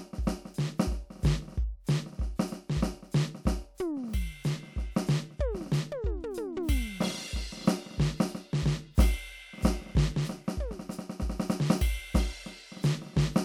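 No technical faults are audible.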